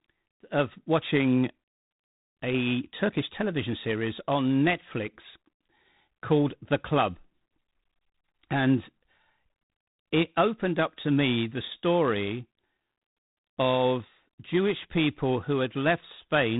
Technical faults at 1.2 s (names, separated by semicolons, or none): G.726 ADPCM